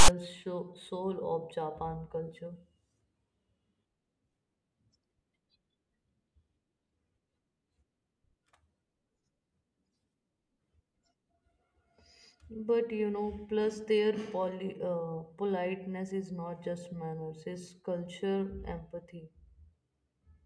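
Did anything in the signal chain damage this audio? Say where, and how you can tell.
Yes. The clip opens with a harsh, loud rasp from 0.00 to 0.08 s, a short burst of static with abrupt edges, leaning to one side rather than centred, before the speech begins. That is file tags played as audio, a storage and playback fault: the decoder treated a block of text metadata at the head of the file as samples. Character bytes, read as sample values, cluster in a narrow, offset range, which produces the lopsided rasp instead of silence.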